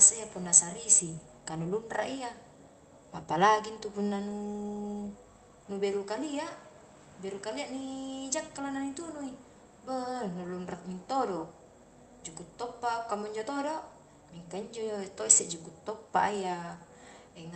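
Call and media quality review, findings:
Nothing stood out on listening; the speech carries the ordinary character of a call path, with content reaching up to about 8 kHz.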